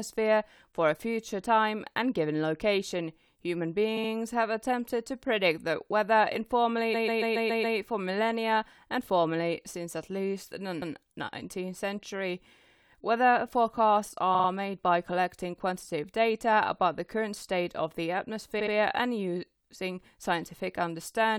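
Repeated frames cause stutters in the speech at five points. From 3.96 to 4.10 s a 70 ms block plays twice more. From 6.93 to 7.77 s a 139 ms block repeats six times, adding 0.84 s. At 10.81 s a 116 ms block repeats once. From 14.34 to 14.48 s a 46 ms block repeats three times. From 18.59 to 18.73 s a 70 ms block repeats twice. The same compressed data was decoded again. Each repeat is a jump back.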